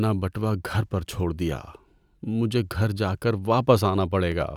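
A speech clip with clock drift buffer slips. From 0.89 s to 4.32 s, a short click recurs about every 1.14 s, roughly four times. Each one likely comes from mismatched device clocks, off by a few hundred ppm, dropping or repeating a small block of samples.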